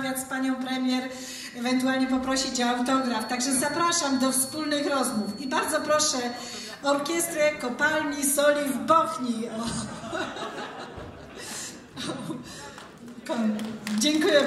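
From 2.89 s to 6.84 s, a feedback whistle sits behind the sound. It is a thin, steady tone at 4.4 kHz. It stays about 15 dB below the main signal and swells and fades slowly in level. It never builds or runs away. The likely cause is a loudspeaker-to-microphone loop held right at the edge of feedback. That loop lets one high frequency keep ringing on its own. The whistle stops at 6.84 s.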